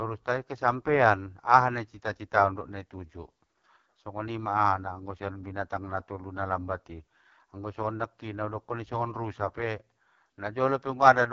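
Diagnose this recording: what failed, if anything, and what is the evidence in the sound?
AMR wideband (HD Voice) codec damage runs throughout the speech, from start to finish, and sits at the codec stage. The speech sounds rough and raspy, and nothing is present above 7.5 kHz. That fits AMR-WB at its lowest rate, around 6.6 kbit/s. At that rate the pulse-driven vocal tract model gets too few bits to track the voice below 6.4 kHz, and the band above it is only shaped noise.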